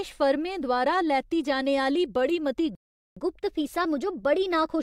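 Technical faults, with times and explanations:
2.75–3.17 s, playback stall: after "बड़ी मती" the speech drops to silence for 0.41 s, likely because the player ran out of buffered data.
3.17–4.83 s, catch-up at higher speed: the backlog is resampled at 1.1 times speed, so the speech runs fast and about one and a half semitones sharp.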